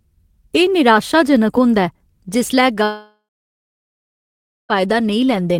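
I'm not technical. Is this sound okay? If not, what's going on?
No, not quite. At about 2.83 seconds the speech cuts out and doesn't return until around 4.72 seconds. It sounds like a long network dropout, most likely the connection stalling so the audio stopped arriving. At first the last bit of sound hangs on as a fading buzz or hiss, then for roughly a second and a half there's just silence. When the speech picks up again, the missing stretch is simply gone, not replayed.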